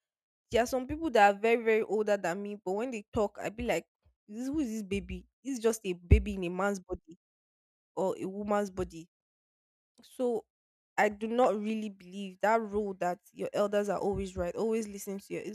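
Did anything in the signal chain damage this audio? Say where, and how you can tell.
No, nothing along the way seems to have hurt this speech recording, and there's nothing here I'd flag at any stage of the chain.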